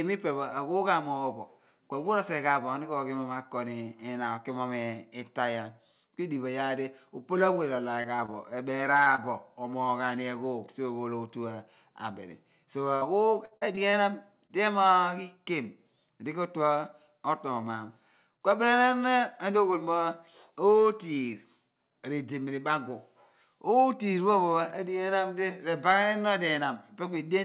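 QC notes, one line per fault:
8.02, 8.16, 8.26, 9.04, 9.16 and 14.47 s: short concealed packet loss. About 20 ms of audio failed to arrive each time. The receiver bridged each hole by extending the preceding sound and then blending back, which leaves a brief smear or wobble and can swallow a short consonant.
12.96 to 13.03 s: burst of packet loss. About 60 ms went missing in one run. The concealment kept the last sound going while turning it down, so a held buzz or fading hiss covers the gap. The audio then picks up later, with that stretch absent.
13.45 to 13.95 s: repeated packet loss (robotic sound). Four gaps fall inside half a second, the longest about 55 ms, and concealment fills roughly a quarter of the span. Each patch is followed closely by another, which gives choppy audio with pieces missing. All of it sits within the call path's 4 kHz band limit.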